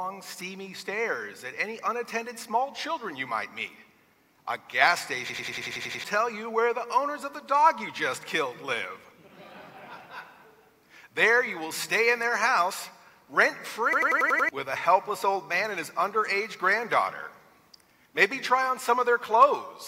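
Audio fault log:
5.29–6.04 s and 13.93–14.49 s, system hang loop: twice the system stalled while the audio hardware kept replaying its ring buffer, so one 92.88 ms slice repeats exactly, 8 times and then 6 times. This fits a 4096-sample buffer. At 10.8 Hz it sounds like a machine-gun stutter, and about 0.7 s and half a second of audio are lost. The waveform shows identical copied blocks, and the spectrogram shows a repeating pattern with vertical seams every 93 ms.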